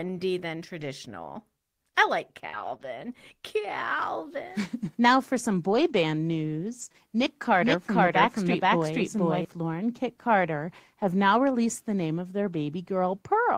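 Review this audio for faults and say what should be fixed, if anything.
Short concealed packet loss occurs at 2.49–2.55 s and 2.77–2.81 s, just after "than traditional I like", and again at 6.89–6.92 s and 6.92–6.96 s. Each gap lasts about 20–40 ms, during which the decoder had no real audio. It bridged each gap by extending the preceding sound, using that sound's pitch where it was voiced and shaped noise where it wasn't, before fading back into the real signal. The result is a brief smear or wobble. Better jitter buffering and a more stable network path would reduce these gaps.

A lost packet rebuilt from error correction is heard at 2.53–2.75 s, 2.81–2.87 s, 5.69–5.95 s and 6.81–6.87 s. The stretches run roughly 40–140 ms, which points to several separate lost packets in each. None of them is silent, because each missing frame was replaced by a low-bitrate copy carried inside the following packet. 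Those substitute frames sound coarser and noisier than the surrounding audio. Reducing packet loss at its source means fewer frames need rebuilding this way.

A doubled audio track runs from 7.61 to 9.45 s. A second, full-band copy of the sound trails the original by about half a second at roughly equal level, with no decay or room colouring. It starts and stops abruptly at those two times. The likely cause is the signal being captured a second time through a slower path, or an edit that left two misaligned copies in the mix. Removing the duplicate route or the extra copy in the edit would fix it.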